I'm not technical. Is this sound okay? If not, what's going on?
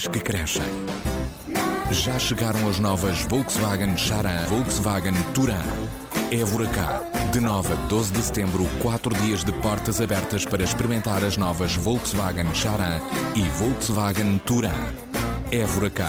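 No. There is a skip ahead at about 4.45 to 4.61 seconds. Roughly 0.4 seconds of sound goes missing there. Playback jumps straight forward, with almost no silence in between. The two sides are joined nearly directly, so it sounds like a sudden lurch.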